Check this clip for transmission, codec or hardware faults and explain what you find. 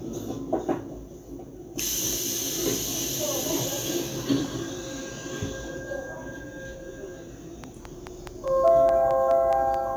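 One hardware-type fault: a train of clicks from 7.64 to 9.75 s, about ten near-identical pulses at a regular 4.75 per second, standing well above the sound, likely from electrical interference or a faulty connection. Their near-identical shape and steady spacing set them apart from random crackle or codec glitches.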